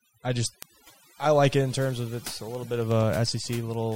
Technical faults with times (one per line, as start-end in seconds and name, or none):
0.00-3.96 overdone noise removal
0.17-3.92 word clock ticks